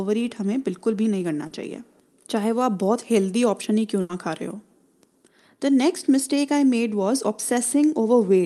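At 1.47 to 1.53 s there is a short concealed packet loss: about 40 ms of the speech never reached the decoder, so the receiver continued the preceding sound and blended back in. It is heard as a brief smear rather than a gap. Unlike a burst, nothing fades.

At 4.01 to 4.11 s comes a burst of packet loss, with about 80 ms missing in a row. The concealment stretches the last sound and turns it down as the gap lengthens, giving a held buzz or fading hiss before the speech resumes further on, with the part in between lost. Its length and audible decay set it apart from the brief smear at 1.5 s.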